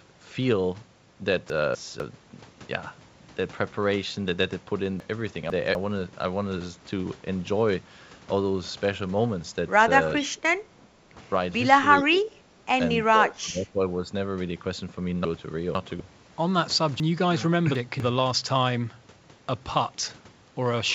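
From 1.5 to 2.0 s, chunks out of order: a 250 ms piece plays one slot late, so the sound jumps back and forth at the hard joins. On the waveform, the envelope steps abruptly at 250 ms boundaries, and the spectrogram shows vertical seams.

The same jumble recurs from 5.0 to 5.75 s, with a chunk two slots late.

From 10.16 to 10.26 s comes an echo leak: a faint copy of the speech about 20 dB below it, delayed by 414 ms, likely loudspeaker pickup the echo canceller failed to remove. It shows as a weak, time-shifted ghost of earlier harmonic patterns.

From 10.3 to 10.65 s, the speech is suppressed in double talk, likely because the echo canceller confused the talker with the loudspeaker echo. For roughly 0.2 s, the level dips by around 30 dB. This appears as a notch in the waveform envelope and thinned, fading harmonics on the spectrogram.

From 10.94 to 11.11 s, the background is gated by the echo canceller. 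The room sound drops by about 7 dB for roughly 150 ms and then returns. On the spectrogram, the noise floor briefly darkens across the band, visible below the 8 kHz ceiling of the call codec.

Double-talk suppression returns from 12.03 to 12.37 s, dipping by around 20 dB over roughly 0.3 s. It recurs from 13.11 to 14.1 s with a dip of around 15 dB over about a second. Both show as sagging envelopes with patchy harmonics.

Chunks out of order return at 15.25 to 16.0 s (two slots late) and at 17.0 to 18.0 s (three slots late). Each produces scrambled jumps and staircase seams every 250 ms.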